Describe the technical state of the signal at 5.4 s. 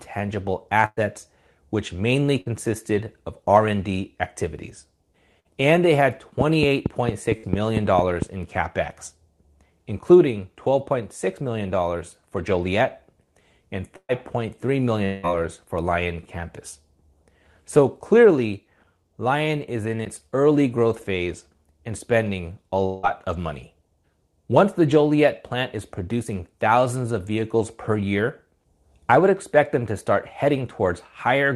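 A burst of packet loss runs from 5.40 to 5.48 s. Concealment stretches the preceding speech into a held buzz or hiss that fades for about 50 ms, then resumes with roughly 60 ms skipped, unlike a plain dropout's silence.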